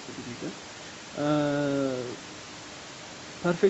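Nothing in this speech clip points to a technical fault: the call's microphone processing and codec path leave the audio band-limited with nothing above 8 kHz, and the room's background sits about 19 dB below the speech.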